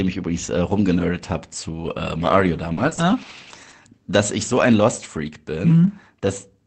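Between 2.27 and 3.81 s, scattered short gaps appear: about four brief packet losses, the longest around 40 ms, each patched by stretching the preceding sound. They come through as small ticks and smears. On a spectrogram they show as short smeared, repeated columns, with no true silences, all beneath the call path's cutoff near 8 kHz.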